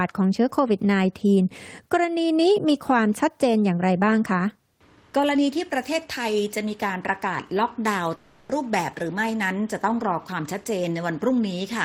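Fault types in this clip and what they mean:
Long network dropout: from 8.15 to 8.51 s the audio stops carrying new material and is replaced by about 340 ms of synthetic continuation, a smeared buzz or hiss carried over from the last sound that decays without dropping into silence. This is likely a stretch of lost network packets that the receiver covered by extending what it last had. When real audio returns at 8.51 s, the missing 340 ms is skipped over, not recovered.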